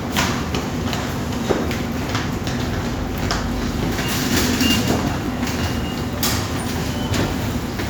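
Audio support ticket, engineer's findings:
Overlapping chunks. Regular stutter/click at 1.22–1.24, 3.24–3.26, 5.26–5.28 and 7.28–7.30 s. Chunking stage. Each 2 s chunk starts 20 ms before the previous one ends, so 20 ms of audio replays at every join, giving a repeating hitch.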